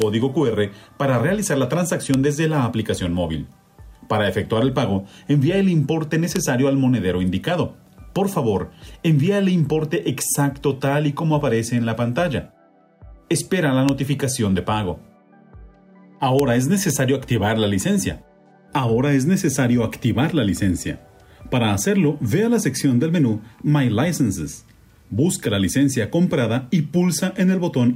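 Integer overflow cracks at 0.02, 2.14, 6.36, 13.89, 16.39 and 16.90 s. Peaks just going past the integer limit wrap to the opposite sign, giving violent, sharp cracks.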